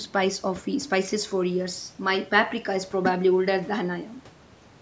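No technical faults occur at any point in the speech. The only processing heard is the call microphone processing working as intended, which leaves nothing above 8 kHz.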